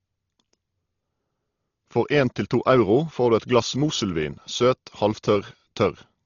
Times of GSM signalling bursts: none

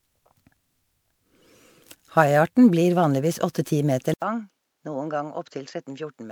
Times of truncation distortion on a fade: none

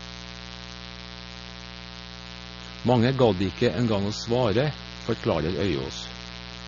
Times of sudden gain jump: none

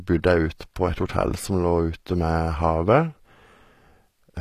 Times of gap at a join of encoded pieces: none

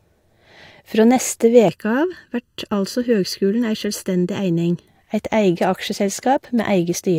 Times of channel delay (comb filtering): 1.68-4.88

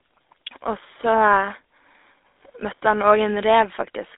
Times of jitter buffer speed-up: none

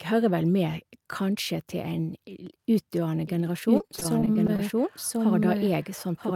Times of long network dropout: none

